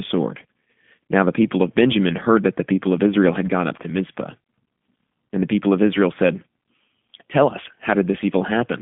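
G.729 codec damage runs throughout. The speech is rebuilt from a vocal tract model, a pitch predictor and sparse pulses per 10 ms frame, which points to an 8 kbit/s stream. The band spans 150 Hz to 3.5 kHz, nothing passes above 3.6 kHz, and the rough, synthetic texture is plainly audible.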